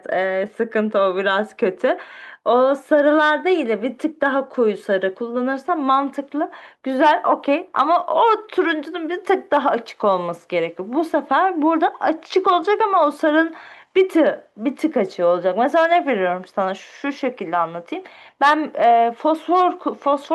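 Speech recording with no technical fault to report. Nothing in it points to a problem in how the audio was captured or delivered.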